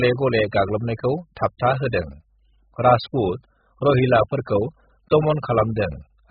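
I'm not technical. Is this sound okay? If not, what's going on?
No. The speech is muffled and smeared from start to finish. Everything above about 5 kHz is missing, so consonants like s and f lose their crispness and sound dull, and held sounds have a watery, warbling texture. The likely cause is heavy AAC compression squeezed to a very small file size: the encoder throws away the upper range entirely and approximates what remains, leaving gaps and swirling artefacts in the sound.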